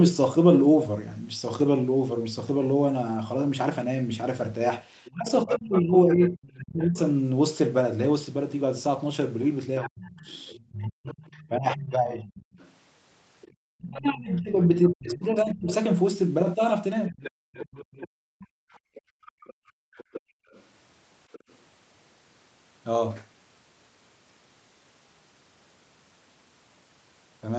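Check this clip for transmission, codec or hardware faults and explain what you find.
Three echo-canceller faults recur through the middle of the clip, all tied to a second talker heard over a loudspeaker. The audio band stops at 8 kHz, which fits an Opus call path running wideband.

Other side's voice leaking through: a faint second voice sits under the speech from 5.04 to 6.58 s, again from 9.83 to 15.19 s, and from 17.07 to 21.56 s. It runs roughly 15, 25 and 20 dB below the main talker. The likely cause is a loudspeaker on the talker's device whose playback the echo canceller failed to strip from the microphone signal.

Speech suppressed in double talk: the main voice sinks and thins out in patches from 5.14 to 6.98 s, from 9.85 to 12.27 s, and from 13.81 to 17.17 s. The deepest dips reach roughly 35, 35 and 25 dB, totalling around a second, a second and a half, and a second and a half. 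This likely happens because both sides spoke at once, and the canceller, unable to tell its own talker from the echo, attenuated everything.

Background gated by the echo canceller: from 17.45 to 20.52 s the room sound under the speech falls away, reaching about 37 dB down, for roughly two seconds in all, then comes back. The loudspeaker was active at that point, and the canceller clamped the microphone hard while it played, releasing it afterwards.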